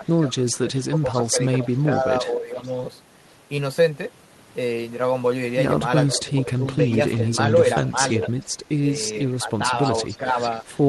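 From 0.0 to 2.57 s the speech is speech suppressed in double talk. It dips by up to about 15 dB in pieces, about a second in total, likely because the echo canceller ducked both talkers at once. It recurs at 6.14–6.64 s, briefly at 7.93–7.98 s (about 5 dB), and at 9.36–10.36 s (about 10 dB). Alongside, from 0.06 to 2.74 s and again from 6.07 to 10.8 s, an echo leak adds a faint copy of the speech about 15 dB down, trailing by 0.44 s. This is likely loudspeaker pickup the far-end canceller missed. Its fixed, long delay separates it from room reverberation.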